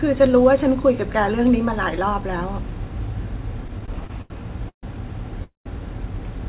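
Speech heard over a narrowband call line, with nothing above 4 kHz, which fits a telephone codec such as G.711, shows repeated stalls (stutter) from 3.64 to 4.31 s. Nine short gaps are filled with stretched-out continuation of the preceding sound, about 189 ms in total and the longest 84 ms, covering roughly a quarter of that stretch. No speech is lost, but the delivery drags and hiccups because packets kept reaching the jitter buffer more slowly than they were played out. Two separate call audio freezes follow, at 4.69 to 4.84 s and 5.44 to 5.67 s. Each is a single hold rather than a string of small ones: the last sound is carried on and fades to silence for about 100 ms and 140 ms respectively, then the speech resumes exactly where it stopped. That pushes everything after it later by about 138 ms and 217 ms, with nothing dropped. The likely cause is a burst of packets held up in transit that emptied the jitter buffer, which sets these long one-off pauses apart from the rapid, choppy stutter before them.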